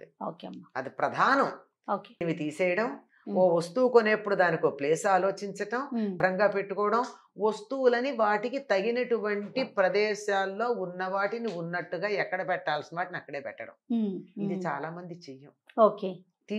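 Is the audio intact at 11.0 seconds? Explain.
Yes, at 11.0 seconds the audio is intact, with nothing audible to disturb it.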